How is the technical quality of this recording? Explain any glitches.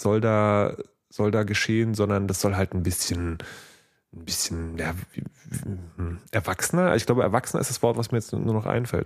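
Nothing stood out as a technical problem anywhere in this recording on listening.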